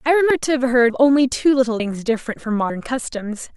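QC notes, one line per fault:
0.30 s: damaged data in a compressed stream. A brief chirp, squawk, click or short hole. The decoder misreads corrupted frames, loses sync and jumps to the next frame header.
0.90, 1.80, 2.70 s: audio missing between chunks. Regular skips, each losing about a tenth of a second. Likely lost at one-second chunk boundaries, then butt-joined.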